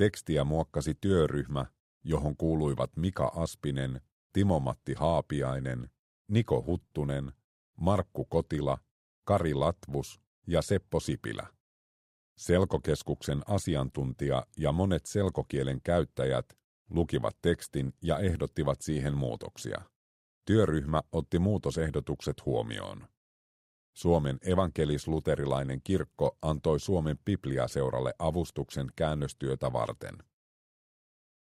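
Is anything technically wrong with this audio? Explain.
No, nothing is technically wrong with this audio.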